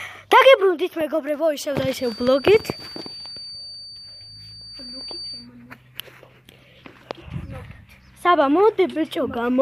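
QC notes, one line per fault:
1.92–5.49 s, feedback whistle: a thin, steady tone at 4.6 kHz sits behind the sound, swelling and fading slowly in level and staying around 20 dB below it. This is likely a loudspeaker-to-microphone loop held just short of runaway, so one frequency keeps ringing without building up. On a spectrogram it shows as a single bright horizontal line at 4.6 kHz across those seconds. The waveform barely changes, since the tone is so much quieter than the program.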